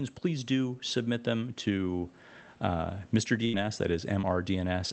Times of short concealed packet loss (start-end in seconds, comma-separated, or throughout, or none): 4.21-4.25